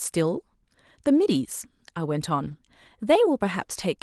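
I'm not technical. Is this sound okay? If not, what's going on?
No. From 2.43 to 2.53 s the speech turns briefly rough and grainy, with no gap. This is a lost packet rebuilt from error correction: missing audio was filled in from lower-quality backup copies.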